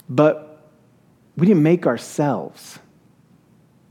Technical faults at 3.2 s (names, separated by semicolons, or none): none